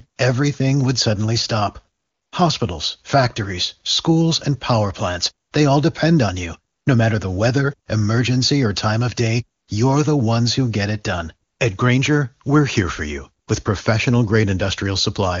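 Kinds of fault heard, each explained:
AMR comfort noise: the phone judged the talker silent and stopped sending speech frames, so the receiver filled the gaps with smooth, synthetic noise that switches in and out, from 320 ms near 2.0 s down to 20 ms, including between "schools and power plants" and "they all depend on".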